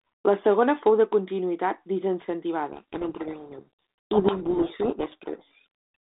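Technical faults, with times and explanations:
2.72–5.64 s, codec payload misread: the receiver unpacks each G.726 code word with its bits in a different order than the sender packed them, so the decoder applies wrong difference steps to its prediction. The speech is buried in harsh, grinding distortion until the packing matches again.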